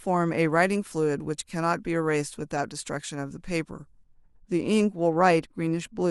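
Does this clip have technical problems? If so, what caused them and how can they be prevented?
Yes. From 0.50 to 4.04 s the speech has pre-emphasis left on. The treble was lifted with the CD 50/15 µs curve, but the matching de-emphasis was never applied on playback. High frequencies therefore sit about 8 dB above 1 kHz at 10 kHz. The sound turns thin and bright, and sibilants hiss and sting. To prevent it, check the pre-emphasis flag and apply the correct de-emphasis whenever emphasised material is decoded or transferred.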